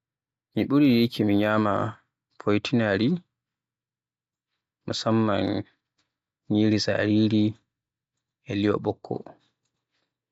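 From 0.0 to 1.5 s there is imaging from linear upsampling. The speech was raised in rate by straight-line interpolation, likely from 16 kHz to 48 kHz. The top is dulled. A faint mirrored copy fills 8 to 16 kHz, about 35 dB down, adding a light metallic shimmer on sibilants.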